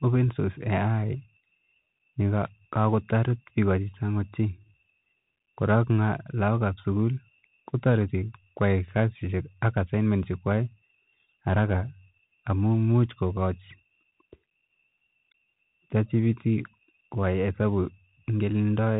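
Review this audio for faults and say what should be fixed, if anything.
Bluetooth CVSD headset codec damage runs throughout the speech. Nothing passes above 3.8 kHz, which fits a 64 kbps CVSD link. One-bit slope coding leaves scratchy sibilants and granular hiss. To prevent it, record through a wired microphone or a wideband Bluetooth profile.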